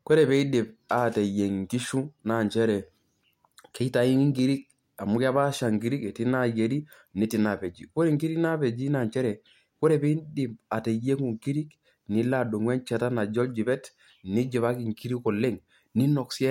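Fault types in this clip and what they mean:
No audible faults detected.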